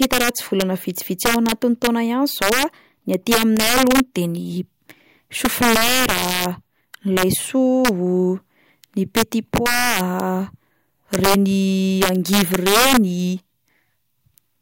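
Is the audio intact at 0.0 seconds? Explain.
No. Integer overflow is present at 0.0 s and runs through the whole speech clip. The level is pushed about 4 dB past the largest value the integer format can hold, and rather than being limited, the loudest peaks wrap around to the opposite extreme of the range. Only around one percent of samples cross that ceiling, so the damage sits on the loud moments, where it comes through as violent, sharp cracks, far harsher than ordinary clipping.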